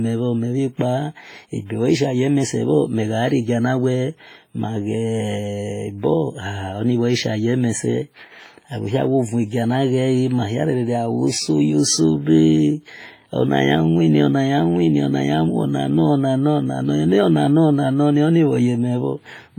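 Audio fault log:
throughout WMA compression: a long-block transform codec, likely at a bitrate near 24 kbps, heavily quantises the speech and zeroes weak spectral lines, so each syllable rings and smears into a washy hiss that swells and fades with the voice, with nothing above 21.4 kHz.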